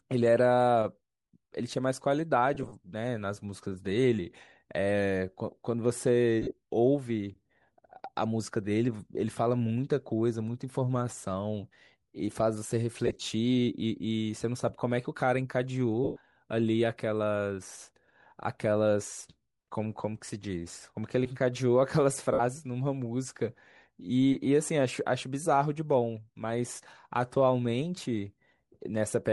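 Bluetooth LC3 compression runs through the whole speech clip. The upper spectrum has a breathy, grainy edge where high bands are thinned and filled with noise, most likely from LC3 coding in short 7.5 ms frames at a rate around 48 kbps. The damage is plainly audible.

Lost LE Audio frames occur at five points. The decoder repeats the last spectrum with scrambled phase and fades it, so each gap becomes a brief noisy smear rather than a clean dropout. From 2.55 to 2.73 s, about 67.5 ms of loss is scattered in short bursts, the longest around 30 ms. From 6.42 to 6.53 s, another 67.5 ms is scattered, with one run near 40 ms. From 13.07 to 13.24 s, 97.5 ms goes in many brief pieces. From 16.04 to 16.17 s, 120 ms is lost. From 22.33 to 22.40 s, 60 ms is lost.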